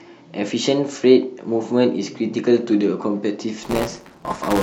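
From 3.63 s to the end, the speech picks up a robotic 188 Hz rattle: buffer tearing. Writer and hardware have slipped, so about a tenth of each period, which fits a 256-sample buffer, replays audio roughly 10 ms old, hard-spliced both sides.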